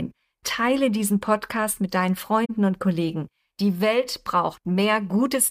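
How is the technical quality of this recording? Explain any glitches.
The recording has one glitch: a corrupt frame concealed by the decoder, from about 2.45 to 2.50 s. Bits inside the compressed data were damaged, the AAC decoder detected it, and rather than play garbage it filled that stretch itself, either muting it or reusing a scrambled version of the last good spectrum. The concealed stretch lasts roughly 58 ms, which fits two AAC frames. Unlike an undetected bit error, there is no harsh squeak or burst.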